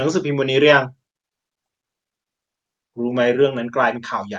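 Speech heard through a call path whose top end stops near 12 kHz, consistent with an Opus-style codec at a moderate bitrate, with no technical fault to report.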